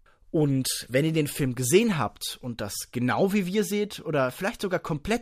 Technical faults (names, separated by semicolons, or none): none